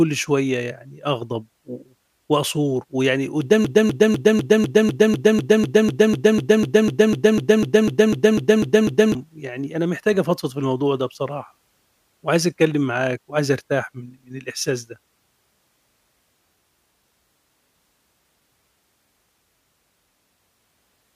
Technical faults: broken-record loop

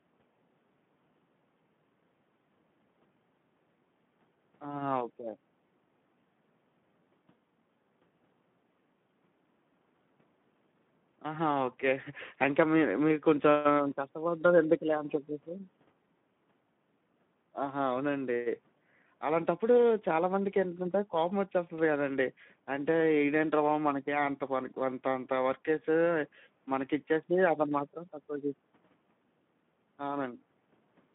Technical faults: Speex codec

